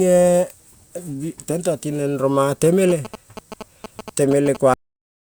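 From 2.90 to 4.57 s, GSM signalling bursts from a nearby 2G phone leak into the circuit and are rectified, giving a galloping dit-dit-dit of short 217 Hz buzzes roughly 10 dB below the speech. On a spectrogram they appear as stacked harmonic bands in clustered vertical stripes.

At 4.74 s the audio is cut off at the end: the final buffers never reached playback, so the speech stops mid-sound and drops straight to digital silence with no decay. The waveform shows an abrupt edge followed by a flat line.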